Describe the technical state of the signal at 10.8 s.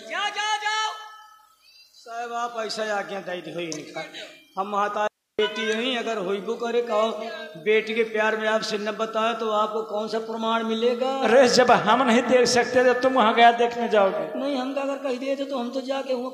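At 10.8 s the signal is intact, with no dropout, distortion, glitch or other technical fault.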